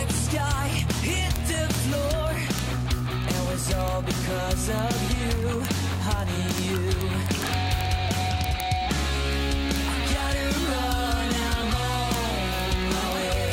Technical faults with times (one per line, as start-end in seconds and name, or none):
0.11-13.53 word clock ticks